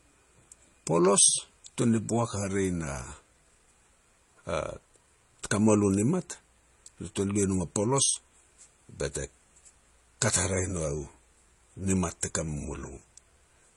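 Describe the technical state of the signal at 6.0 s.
At 6.0 s the speech has likely been through transcoding between lossy codecs, an MP3-like stage and then HE-AAC, stacking both codecs' artefacts with nothing above 11.4 kHz.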